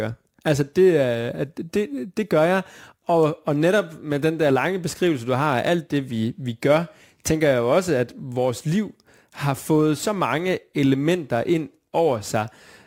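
Throughout the speech, crude rate conversion repeats samples without filtering, which fits a 44.1 kHz to 48 kHz change. The periodic error sits around 30 dB below the speech and is heard as a gritty, inharmonic fizz tracking loud and high-frequency sounds.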